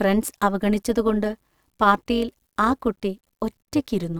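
Speech carrying overlap-add ripple throughout: level pulses about 6 dB at around 200 Hz, a metallic buzz with extra tones around the voice, seen as a regularly scalloped waveform envelope with spectrogram sidebands.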